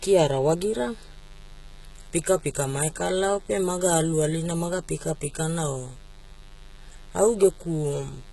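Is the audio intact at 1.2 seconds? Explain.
No. At 1.2 seconds the speech carries two faults, and both run through the whole clip.

The first is mains buzz. Sharp switching spikes enter the signal twice in every 50 Hz cycle. Their harmonics stack up from 50 Hz into the kilohertz range. The result is a steady, raspy buzz under the speech. It sits roughly 30 dB below the speech.

The second is heavy codec damage, likely from HE-AAC compression at a low bitrate, around 16 kbps. Nothing is left above 11.8 kHz. The treble is not the original. It is rebuilt by copying lower bands upward and shaping them coarsely. The copied harmonics do not line up with the real ones across the join. S sounds come out gritty, metallic and lispy.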